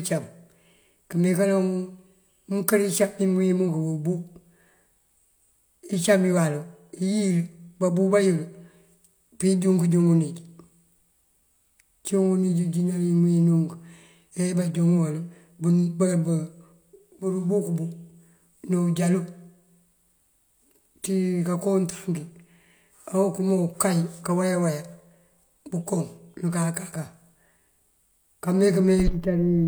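Speech recording with no audible technical faults anywhere in the clip.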